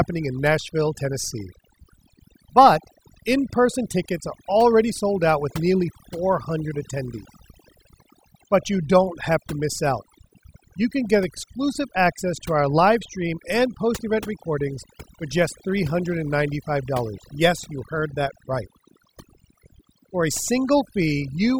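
Speech with overdone noise removal throughout: overly aggressive noise reduction gates bands near the noise floor, leaving near-silent, twinkling gaps.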